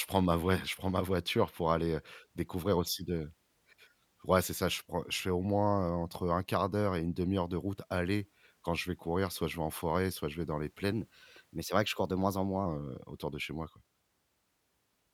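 From 10.93 to 12.66 s, after "je vais dans les", the speech runs about 1.09 times fast and roughly 1.5 semitones sharp: a wrong sample rate, which fits 44.1 kHz audio played at 48 kHz.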